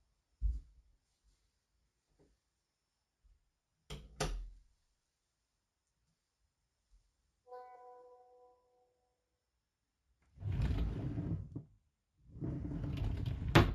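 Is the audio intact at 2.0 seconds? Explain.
No, at 2.0 s you're hearing imaging from linear upsampling, which runs through the whole clip. The audio sounds like it was stretched up from a 16 kHz rate by drawing straight lines between samples. That dulls the top end and leaves a faint mirror image roughly 30 dB down between 8 and 16 kHz, heard as a light metallic shimmer.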